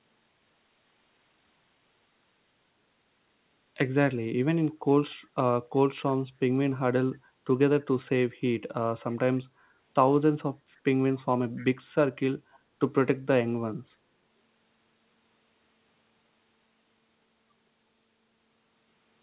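At 5.1 to 5.26 s a faint echo leak appears: a delayed copy of the speech trailing it by 293 ms, very quiet at roughly 40 dB below the speech. It is likely residue that the far end's echo canceller missed. On a spectrogram it shows as a dim, shifted ghost of the preceding harmonics.

From 9.49 to 9.79 s the background is gated by the echo canceller. The room tone dips by about 7 dB for roughly 300 ms, a brief hole in the waveform's noise floor that closes when the suppression releases.

The echo leak returns at 11.57 to 11.65 s, stronger at around 25 dB below the speech, and again at 12.52 to 12.59 s, at around 35 dB down. Both times it trails by the same 293 ms and sits inside the band that ends at 4 kHz.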